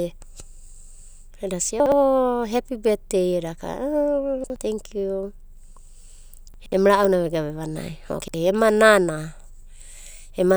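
Speech with four brief jumbled moments, each caused by chunks out of order: a 60 ms block of audio played one chunk late at 1.8 to 1.92 s (just before "hepi betdei"), 4.44 to 4.56 s and 8.22 to 8.34 s (just before "ema nana"), and two chunks late at 6.54 to 6.72 s. Each has three hard joins at the seams. Unlike a dropout, nothing is missing; the sound is all present but briefly reshuffled.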